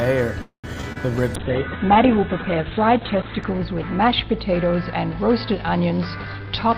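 From 0.41 to 0.75 s the audio stalls: the last sound carries on as a buzz or hiss that fades out, about 110 ms of silence follows, and then the sound resumes exactly where it left off. This is a call audio freeze, likely caused by packets being held up in transit so the jitter buffer ran empty. The receiver stretched the last sound to fill the wait, inserting a gap of about 0.22 s while losing nothing. Two brief smears follow at 0.81 to 0.85 s and 0.93 to 0.97 s. These are short concealed packet losses, where about 20 ms of audio failed to reach the decoder in time each time, and the receiver papered over each hole by continuing the preceding sound before blending back into the real signal. From 1.36 s to the end the sound turns rough and muffled, with no clear recovery. This is a call bitrate drop: the encoder went from 48 to 8 kbps and held the lowest rate for about 2 s, coding more coarsely and cutting the bandwidth from 20 kHz to 4 kHz. 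Between 5.91 and 6.76 s the audio also runs hurried at unchanged pitch, about 110% speed. This is a jitter buffer speed-up, in which the receiver trimmed short pitch-period pieces, roughly a tenth of a second in all, to shed excess buffered delay.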